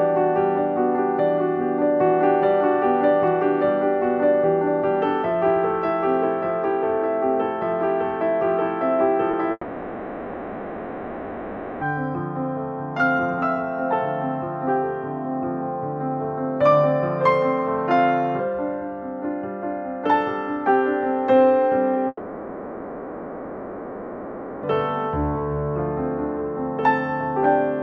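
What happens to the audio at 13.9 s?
Nothing goes wrong at 13.9 s; the audio carries straight through that moment with no dropout, click, distortion or other fault.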